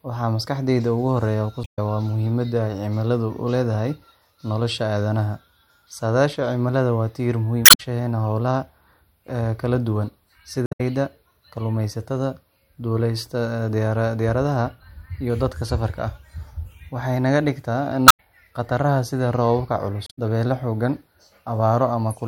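Five short bursts of damaged data in the compressed stream interrupt the speech, at 1.61–1.79 s, 7.62–7.80 s, 10.63–10.81 s, 18.08–18.20 s and 20.04–20.19 s. Each lasts roughly 0.12 to 0.18 s. Corrupted bytes make the decoder misread frames and lose sync until it finds a valid header, producing a chirp, squawk, click or short hole. On a spectrogram each shows as a smeared, garbled patch breaking the harmonic stripes; the waveform shows abrupt, jagged discontinuities.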